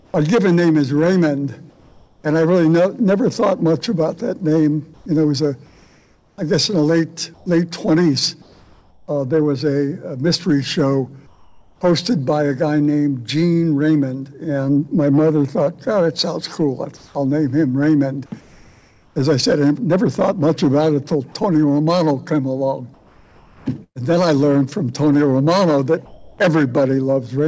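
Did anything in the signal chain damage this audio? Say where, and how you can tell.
Yes. In the call processing, the pauses at 0.0–0.14, 1.70–2.24, 4.94–9.08, 11.27–11.81, 16.97–19.16, 22.94–23.98 and 26.05–26.38 s lose their real background to a flat, featureless hiss, up to about 10 dB quieter. That's likely comfort noise in place of the background, generated by the receiver while the sender's discontinuous transmission went quiet.

On the network side there's a burst of packet loss at 23.84–23.98 s. About 120 ms of audio never arrives. The receiver stretches the last sound across the hole, then drops to roughly 70 ms of silence before picking up further along.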